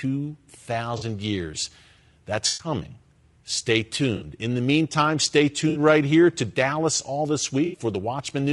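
Low-delay AAC compression runs through this whole speech clip and is plainly audible: the voice has a rough, grainy texture, with noise filling the gaps between harmonics and a top band that sounds lowered or synthetic. This is likely an AAC-ELD encode at around 32 kbps, where each low-delay frame codes roughly 500 frequency lines and too few bits are left to carry the fine spectral detail. AAC frame loss with concealment occurs at 0.97–1.03 s, 2.47–2.67 s, 4.15–4.25 s, 5.69–5.79 s and 7.65–7.79 s. Each is a brief smeared, noisy or phasey patch where the decoder rebuilt missing frames from the last good spectrum. The longest patch, at 2.47 s, fits about 120 ms of lost audio.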